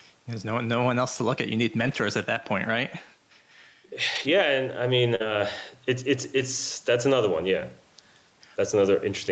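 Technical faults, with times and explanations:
Throughout, gain pumping: the level of quiet passages and the room background swells in the gaps and ducks by around 5 dB under each loud syllable, squashing loud and soft together. This is likely a fast limiter reacting to gain set too high, not dropped audio.
1.79 to 1.93 s (just before "at that point"), 4.15 to 4.25 s, 5.20 to 5.30 s (between "I mean" and "it's it's") and 6.38 to 6.44 s, lost packet rebuilt from error correction: stretches of 80, 60, 60 and 40 ms turn rougher and noisier but never go silent, because the decoder played low-bitrate copies carried in the following packets.
5.15 to 5.22 s, right after "I mean", short concealed packet loss: about 40 ms never arrived and no backup copy was available, so the decoder extended the preceding sound for 43 ms and blended back. The result is a brief smear or wobble rather than the grainy texture of the rebuilt stretches.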